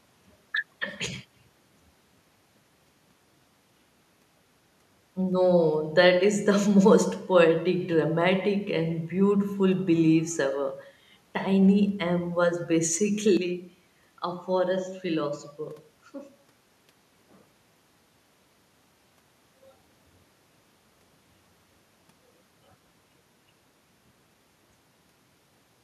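At 13.37 s the speech abruptly loses its top end, the level falls by roughly 5 dB, and a different, faint background noise appears well below the signal, around 50 dB down. There is no gap at the change. The sudden narrowing and shift in tone and level are most likely an input switched to a poorer device mid-recording. At 19.63 s the full bandwidth and original level return.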